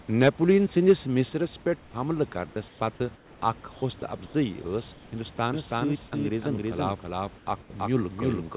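Microphone overload at 0.23 s and again at 0.89 s gives the loudest syllables a harsh, crackling edge. The peaks, about 4 dB and then about 3 dB over full scale, were likely flattened at the converter, with a small share of samples cut in the first burst and a larger share in the second.

Microphone volume stepped down at 0.28 s and again at 1.29 s. Voice and background both drop abruptly, by about 3 dB and then about 5 dB. This is likely the call software reacting to the distorted peaks before and lowering the input level in single steps.

Comfort noise in place of the background appears at 1.8, 2.68, 3.16, 3.72, 4.26 and 4.92 s. Each gap lasts 80 to 260 ms, and the longest is at 3.16 s. The sender likely stopped transmitting during these pauses, so the receiver filled them with synthetic noise. The room's background turns into a smoother noise of a different tone, mostly a few decibels quieter.

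A doubled audio track starts abruptly at 5.54 s and runs to the end. A full-band copy at roughly equal level trails the original by about 300 ms, with no room colour or decay. This is likely a second, slower capture path mixed in.

Comfort noise appears again inside that doubled stretch, at 7.38 and 7.62 s, each lasting 80 ms. The second swap drops the background by about 8 dB. Throughout the clip the call path's 4 kHz ceiling keeps the sound narrowband.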